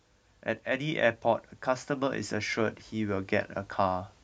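From 0.64 to 3.39 s, automatic gain rising, a gain control boosting quiet input, lifts speech and background about 6 dB; the waveform envelope steadily widens.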